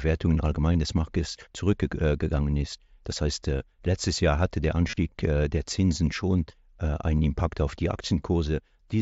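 Voice packets from the headset were dropped twice in this speech, and each time the receiver patched the gap by repeating the best-matching piece of the preceding waveform. That is concealed Bluetooth headset packet loss. At 0.73 s a short loss of two frames, 15 ms in all, occurs. From 4.88 to 4.97 s about 52 ms of losses are scattered, the longest run being 30 ms, giving a brief buzzy held tone and a slight warble as real audio resumes through the mSBC link.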